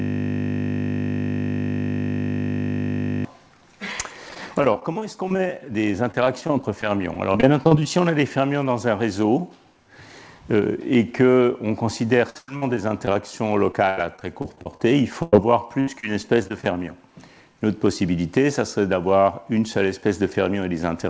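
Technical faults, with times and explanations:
0.00–3.25 s, system hang loop: a steady 50 Hz buzz, already running when the clip opens, as one 20 ms piece of audio repeats about 160 times while the system is frozen.
4.29–7.86 s, 12.30–13.16 s, 13.72–14.87 s and 15.80–16.71 s, repeated packet loss (robotic sound): choppy sound with pieces missing. Packets were lost repeatedly, and each gap of up to 96 ms was patched by continuing the last sound, covering 12 to 28 percent of each stretch.
15.22–15.33 s, burst of packet loss: the sound is held and fades for about 100 ms. Packets were lost in a row, and the audio resumes with that stretch missing.
15.37 s, short concealed packet loss: a brief smear or wobble where 10 ms of audio never arrived and the gap was filled and blended back in.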